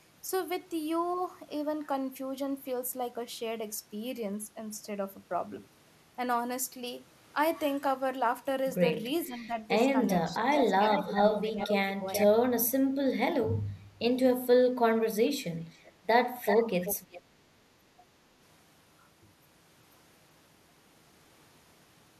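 Around 9.27 to 9.58 s and again from 9.97 to 10.82 s, the speech sags by about 10 dB in patches. That's speech suppressed in double talk: both ends were likely talking at once, and the echo canceller, unable to tell the near talker from loudspeaker echo, pulled everything down. It gets worse from 11.15 to 12.08 s, where the dip reaches about 20 dB and roughly half a second of speech is chewed up.

Overlapping that, from 10.5 to 11.75 s there's echo leak: a copy of the speech trailing 427 ms behind, about 10 dB under the live signal, most likely from a speakerphone whose canceller let some of its mic pickup back down the line. A short scrap returns at 12.14 to 12.26 s, a faint one at about 30 dB down at 15.74 to 15.92 s with a 381 ms lag, and a loud stretch from 16.45 to 17.22 s sits only about 5 dB below the speech.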